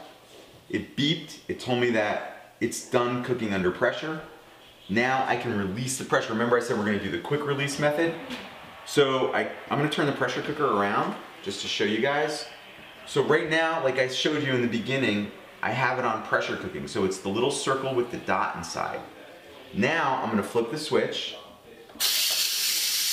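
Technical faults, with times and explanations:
Nothing technical stands out here; the audio comes across without any faults worth flagging.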